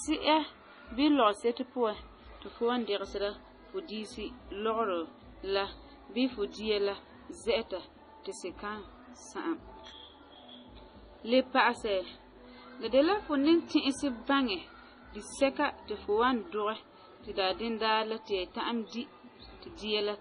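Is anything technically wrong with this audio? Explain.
Yes. Throughout the speech, there is nothing above 10.5 kHz, and the sound is watery and swirly with smeared attacks. The likely cause is heavy MP3 compression, which fits a bitrate around 24 kbps. Starved of bits, the encoder cuts the treble and zeroes weak frequency lines. Those lines flicker between frames, and s sounds turn metallic.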